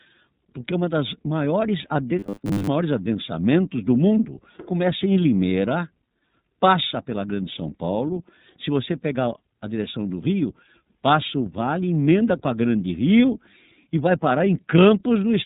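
The speech runs through the iLBC codec throughout. Each frame's excitation is coded on its own, in blocks that fit 30 ms frames at roughly 13.33 kbps. Nothing survives above 4 kHz, so the sound is narrowband and dull at the top. The codec damage is plainly audible as a rough, slightly synthetic texture over the whole clip. From 2.19 to 2.67 s, between "porque uma das maiores" and "adensamentos do mundo começa", new audio likely stopped arriving fast enough, and the playback filled the gap by looping a very short buffer. That loop imposes a fixed 100 Hz pitch, which fits a buffer about 10 ms long, and most of the underlying audio in that stretch is replaced. The result is robotic sound from repeated short buffers, a stiff metallic buzz that only loosely tracks the speech for about half a second.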